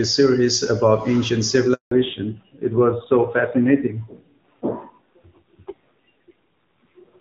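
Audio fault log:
1.73 to 1.91 s, handover gap: right after "series about ancient" the speech cuts out for 180 ms while the call switches networks, so nothing gets through.
1.91 s onward, fallback to narrowband: once the link returns, everything above 4 kHz is gone, so the speech turns duller and rougher. That points to a drop from HD Voice at around 23.85 kbit/s to narrowband at about 7.4 kbit/s.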